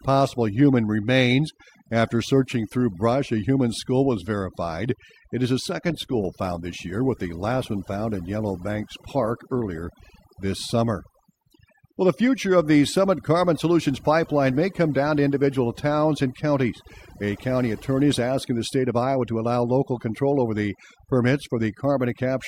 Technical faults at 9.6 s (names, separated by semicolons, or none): overdone noise removal; adaptive stream at a lower bitrate